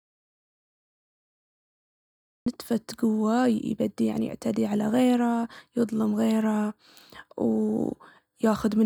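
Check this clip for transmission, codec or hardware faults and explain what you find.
There is one fault, an audio dropout to silence that is already under way when the clip begins. From the start to 2.46 s the input is lost and the recording holds silence, most likely from a disconnected device, failed link or stray mute. The speech then cuts in abruptly. The waveform is a dead-flat line with no room tone, and the spectrogram is blank until sound appears suddenly at 2.46 s.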